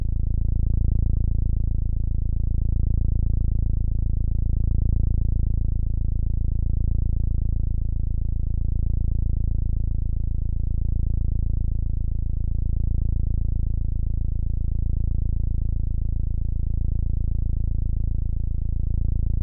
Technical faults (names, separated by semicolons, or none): none